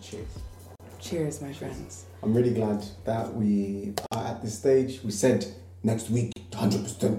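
At 0.76 s the sound drops out for about 42 ms, then again at 4.06 s for about 51 ms and at 6.33 s for about 36 ms. Each one is a gap at a join of encoded pieces. The segments were encoded separately and butted together untrimmed, so every encoder's start-up delay and last-frame padding stayed in as silence. The codec smears the edges of the holes, and the sound picks up right where it stopped.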